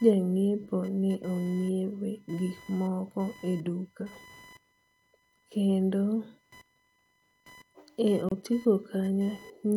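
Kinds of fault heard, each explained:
Computer activity noise: Changing load in the computer's processor, graphics or mouse shifts the ground shared with the audio circuit, and that disturbance leaks into the recording. Here it runs under the whole speech clip as a buzzy, chirping texture pulsing at roughly a kilohertz, sitting about 30 dB below the speech. Unlike steady mains hum at 50 or 60 Hz and its harmonics, it shifts and flickers with what the computer is doing, not with the speech.
Gap at a join of encoded pieces: The audio was encoded in separate pieces and joined without trimming, so the encoder's start-up delay and end padding both remain at the join. From 8.29 to 8.32 s a silence of about 28 ms opens in the middle of continuous speech, with its edges smeared by the codec. Unlike a dropout, where material goes missing, the speech picks up exactly where it stopped, so nothing is skipped. 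The timing is only stretched.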